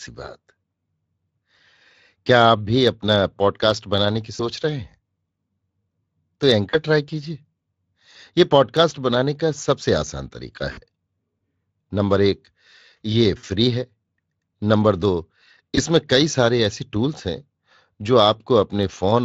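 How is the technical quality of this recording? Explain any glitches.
The recording has five short dropouts where VoIP packet loss was concealed by the speech codec, heard through a lightly coloured Speex codec path at about 24 kbps. They occur at 4.35 to 4.42 s, 6.69 to 6.78 s, 10.71 to 10.80 s, 13.37 to 13.45 s and 15.75 to 15.79 s. Each dropout removed about 20 to 60 ms of sound, which fits one to three 20 ms frames. The decoder filled each gap from its last pitch and filter, so the sound turns into a fading buzzy or noisy smear that stays weak briefly afterwards.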